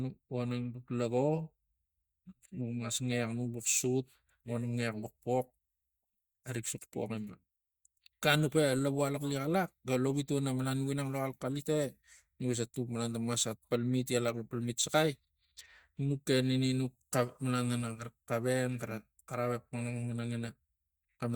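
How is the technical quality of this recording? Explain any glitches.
No glitches are audible anywhere in the recording, so there is nothing to explain.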